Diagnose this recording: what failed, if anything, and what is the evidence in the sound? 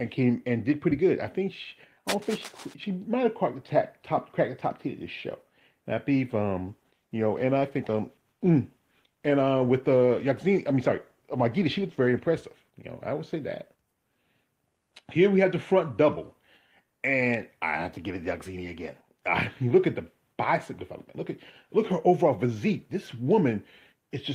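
From 2.08 to 2.74 s a dense, uneven scratching and rustling sits over the sound, roughly 10 dB below it. This is cable scratch noise in the analogue wiring. A worn lead, connector or control being moved makes its contact resistance jump about rapidly, and those fluctuations ride on the signal as irregular bursts of noise. A disturbed cable or plug is the likely source.

From 6.63 to 12.43 s the sound turns rough and coarse, then clears again, with the degraded state holding for about 5.7 s of that span. This is a call bitrate drop at the codec and network stage. The connection's bandwidth estimate fell, and the encoder was told to spend far fewer bits. The change in quality fits a fall from about 32 kbps to 18 kbps. Opus then coded the audio more coarsely until the rate recovered.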